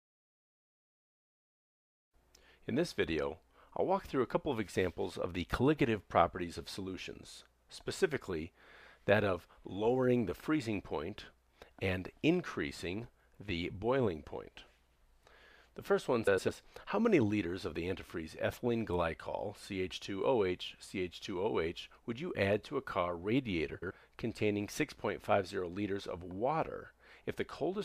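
The audio has two frames out of order faults, from 16.27 to 16.49 s and from 23.74 to 23.91 s. In each, two adjacent blocks play swapped, of about 104 ms each in the first and 78 ms each in the second, which fits runs of roughly 26 ms frames. The result is a brief garbled flutter. Unlike a dropout or a repeated frame, no time is lost and nothing is doubled.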